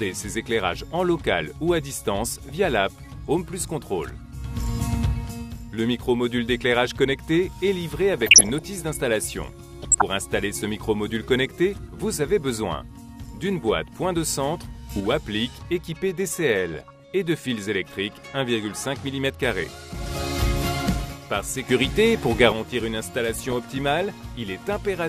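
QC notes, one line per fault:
2.34–2.55 s, 8.13–8.62 s, 9.82–10.02 s, 16.74–17.00 s, 23.34–23.53 s: DAB burbling. Brief noise blips where corrupted MP2 sub-band samples and scale factors flare for single frames, at a bit error rate of around half a percent. Unlike a gain jump, level is never shifted as a whole.
14.91 s and 21.69 s: sudden gain jump. The whole sound and its noise floor step up together, by about 6 dB and then about 7 dB, with no ramp. The likely cause is digital gain applied abruptly. Unlike burbling, the change is broadband, not bubbly.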